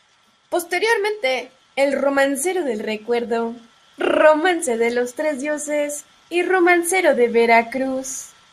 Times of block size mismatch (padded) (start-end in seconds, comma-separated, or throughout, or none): none